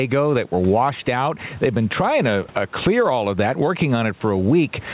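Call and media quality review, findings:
Gain pumping, whole clip. Level swing around 15 dB. Dynamics squashed, loud and soft parts pulled close together. Likely cause: mic gain set far too high, with a fast limiter or compressor clamping each peak. Room noise sits about 35 dB below the speech. Nothing above 4 kHz, consistent with a narrowband G.711 A-law path at 64 kbps.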